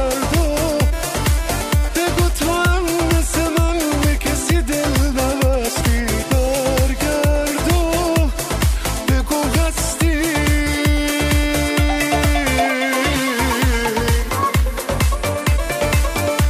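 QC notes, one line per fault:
5.80 s and 10.66 s, compressed frames skipped. The audio jumps forward, by about one frame at 5.80 s and about three at 10.66 s. That fits a 26.1 ms frame. Overlapping frames blur each join into a short smeared blip, not a hard click.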